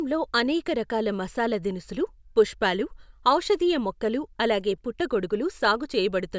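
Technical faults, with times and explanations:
Nothing stood out on listening to this speech recording.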